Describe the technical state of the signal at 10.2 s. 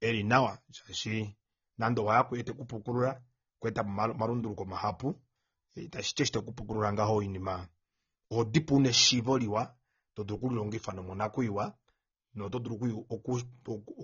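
At 10.2 s the speech carries the same fault heard across the whole clip: low-bitrate audio saved at a high bitrate. Nothing exists above 6.9 kHz, so on a spectrogram the energy ends at a flat horizontal ceiling with empty space above it, and sibilants sound dull. The cause is likely an earlier low-bitrate encode whose losses a later high-bitrate MP3 simply preserved, since re-encoding cannot restore what was discarded.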